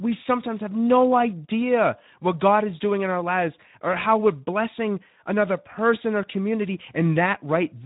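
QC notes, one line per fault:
Throughout: Speex codec. The speech sounds hoarse and grainy, with a plainly audible noisy edge, and it is dull because nothing reaches above about 3.8 kHz. This is a CELP speech codec squeezed to a low quality setting, which fits roughly 11 kbps. With so few bits, the excitation that drives the voice model is coarse, so the natural texture is replaced by a noisy approximation, and the band is narrow.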